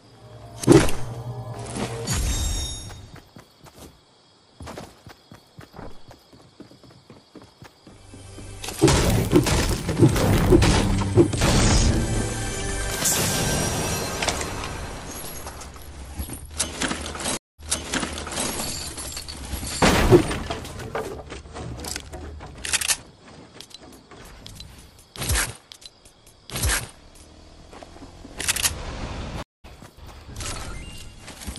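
Twice the connection dropped and the player rejoined mid-stream with a fresh decoder, a stream reconnect. At 17.37 s the audio cuts to silence for 213 ms, then resumes about 0.9 s earlier, so the passage up to 18.49 s repeats as the server resends a burst. At 29.43 s another 213 ms gap follows, and the audio picks up roughly a fifth of a second later, skipping that material by 29.65 s.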